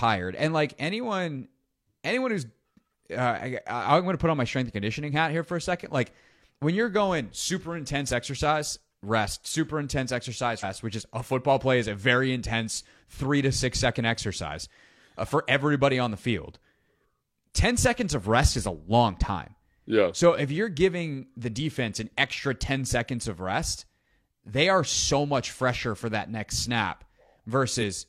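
Damaged data in a compressed stream shows up twice, first from 10.59 to 10.65 s, between "exercise rest super intense" and "which is a football", then again from 27.77 to 27.82 s. Each time a corrupted stretch of the encoded speech reaches the decoder, which misreads those frames and loses sync until it locks onto the next valid frame header, leaving a brief glitch of roughly 50 ms.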